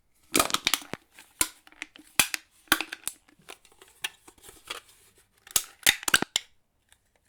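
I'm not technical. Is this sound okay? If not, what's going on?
No. There is a loud pop at 0.94 to 0.96 s and another, stronger one at 6.22 to 6.25 s. Each is likely a sudden electrical jolt, such as a plug, switch or static spark, added to the signal, heard as a sharp crack while the sound carries on beneath.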